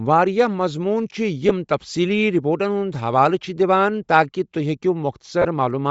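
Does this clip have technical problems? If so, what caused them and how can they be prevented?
Yes. Throughout the speech there is a breathy, grainy edge with plainly audible codec damage, likely from Bluetooth LC3 compression at a low rate, which fits about 32 kbps in 10 ms frames. Upper-band detail is discarded and refilled with noise, so a spectrogram shows a smeared, speckled top band instead of crisp harmonics. Preventing it means raising the LC3 bitrate or choosing a higher-quality LE Audio configuration.

There are lost LE Audio frames at 1.49 s and again from 5.42 to 5.45 s. These gaps fit one lost 10 ms frame and then three in a row. In each, the decoder repeated the last spectrum with scrambled phase, giving a brief noisy smear. The waveform shows a short patch of noise-like texture in place of the normal speech cycles, and on a spectrogram it appears as a thin vertical band of diffuse energy. 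Preventing it means improving the radio link by shortening the distance, removing obstructions, or reducing 2.4 GHz interference.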